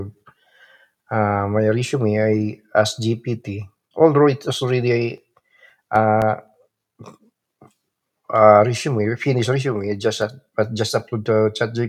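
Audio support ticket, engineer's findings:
CD scratch ticks in the speech. Burst one, 4.92–6.74 s: 8 ticks, about 4.4 per second. Burst two, 9.96–11.26 s: 6 ticks, similar rate. Longest tick about 1.0 ms in burst one, 1.5 ms in burst two. Probable component: disc surface or read path. Damage exceeds error correction once per revolution, so the player conceals the bad samples. Differs from random clicks or buffer dropouts: spacing is regular and tracks disc rotation.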